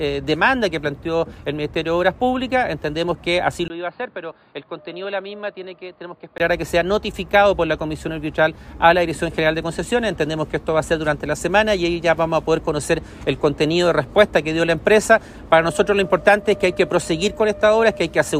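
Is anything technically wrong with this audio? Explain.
Yes. From 3.68 to 6.40 s there is an input switched to a poorer device, likely a change to another microphone. After a 20 ms gap the sound turns dull, cut off above 4.8 kHz, around 10 dB quieter, with a faint new background noise.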